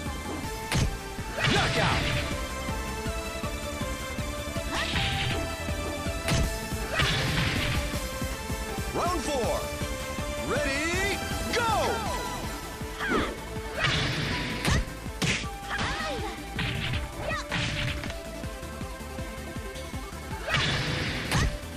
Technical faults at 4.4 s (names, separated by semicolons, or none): none